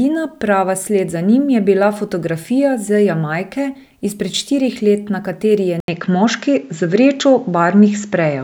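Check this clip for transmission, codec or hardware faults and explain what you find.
One fault, at 5.80 s: the input was likely switched to a poorer device. The replacement path passes nothing above 7.6 kHz, so after an 80 ms gap the speech turns duller, shifts in level by a few dB, and carries a faint new background noise to the end.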